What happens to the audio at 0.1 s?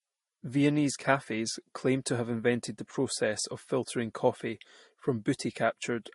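At 0.1 s the speech already has no content above about 11.1 kHz, and this dullness continues through the whole clip. Two distinct kinds of coding artefact are heard together, likely from transcoding between lossy codecs, which fits an MP3-style encode followed by a Vorbis one. The second codec spends its limited bits on the first one's smearing and adds its own warbly artefacts, while the lowest cut-off in the chain remains. A single low-bitrate encode would show only one artefact character.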